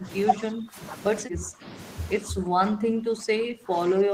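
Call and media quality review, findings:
Speech suppressed in double talk: speech level dips in four stretches, at 0.00–0.08 s, 0.33–0.81 s, 1.21–1.76 s and from 2.15 s to the end, by about 15 to 20 dB at the deepest. Likely the echo canceller's suppressor misreading near-end talk as loudspeaker echo during simultaneous far-end speech and attenuating both. Waveform shows envelope sags.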